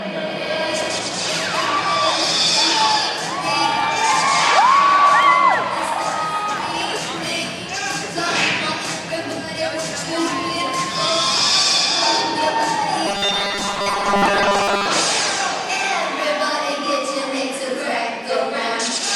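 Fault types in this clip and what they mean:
Robotic sound from repeated short buffers: new data likely reached the playback stage too seldom, so it filled each gap by looping its last short chunk while the fresh audio was thrown away. From 13.07 to 14.86 s, most of the sound is replaced by these repeats. The looping imposes a rigid, metallic buzz at 200 Hz, which points to a repeated chunk of about 5 ms, and the underlying sound only loosely keeps its shape.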